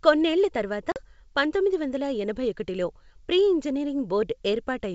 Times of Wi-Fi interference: none

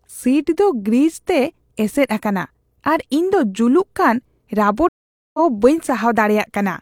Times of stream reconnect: 4.89-5.40

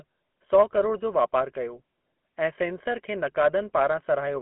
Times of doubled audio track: none

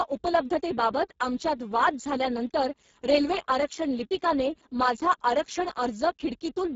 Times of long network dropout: none

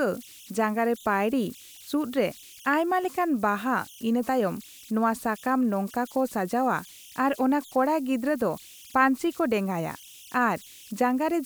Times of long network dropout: none

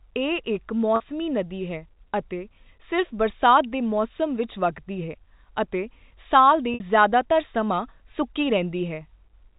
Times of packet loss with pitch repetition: 0.96-1.00, 6.74-6.80

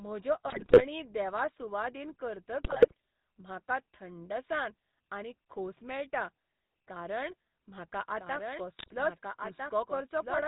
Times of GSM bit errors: 0.48-0.86, 2.64-2.94, 8.77-8.95

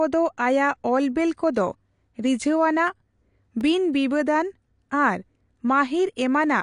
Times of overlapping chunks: none

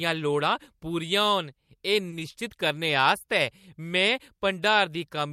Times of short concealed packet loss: 2.19-2.21

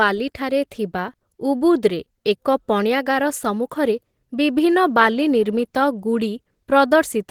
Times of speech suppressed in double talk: none

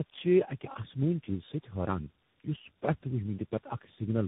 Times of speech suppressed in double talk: none

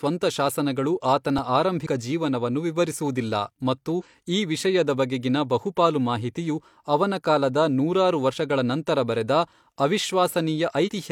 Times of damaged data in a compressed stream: 1.82-1.87, 3.95-4.02, 8.32-8.36, 10.83-10.89

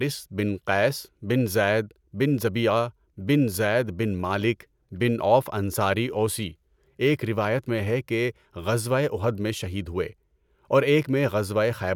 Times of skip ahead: none

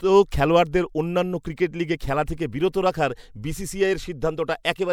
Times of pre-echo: 2.26

